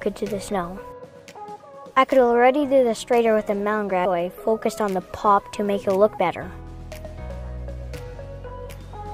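The audio has compressed frames skipped at 1.30–1.32, 4.04 and 8.69 s: it lurches ahead about a fifth of a second, then roughly 0.3 s twice, which fits several 23.2 ms frames lost or rejected each time.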